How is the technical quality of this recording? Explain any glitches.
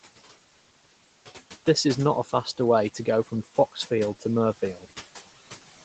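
The recording has audible noise-suppression problems. The suppressor works on the speech throughout, and in two places it clips the speech itself.

Noise suppressor artifacts run through the whole clip. The suppressor pulls the steady room noise down by about 15 dB, frame by frame, so the background sinks in pauses and swells under talking. It pumps with the speech, unlike a fixed hum or hiss.

Speech cut by the noise suppressor happens twice. From 2.24 to 2.59 s, after "is not a" and before "way to go", a brief stretch totalling about a tenth of a second drops by up to about 11 dB. From 3.26 to 3.77 s, just after "way to go", a similar stretch drops by up to about 14 dB. Both times the suppressor treated quiet speech as noise, so it sounds swallowed. A dropout would be silent, but here it is only faint.

The room noise sits about 17 dB below the speech, and the call's microphone processing leaves nothing above 8 kHz.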